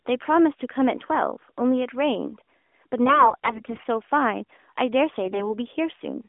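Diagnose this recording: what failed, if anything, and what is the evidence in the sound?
AMR bit errors, arising on the radio link and surfacing in the decoder. From 3.06 to 3.86 s and 5.24 to 5.54 s, the narrowband speech turns hoarse and gargly while pitch and level hold. Flipped low-priority bits misplace excitation pulses. The first burst sounds harsher.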